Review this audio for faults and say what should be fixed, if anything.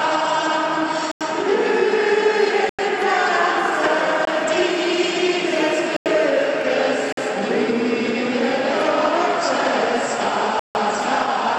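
Blocks of digital silence occur at 1.12, 2.69 and 5.97 s (93 ms each, which fits a 4096-sample buffer), and at 4.25 s (21 ms), 7.13 s (48 ms) and 10.59 s (156 ms). Each cuts out and back with no fade, unlike a faded dropout. Enlarging the output buffer or raising the audio thread's priority would keep it filled in time.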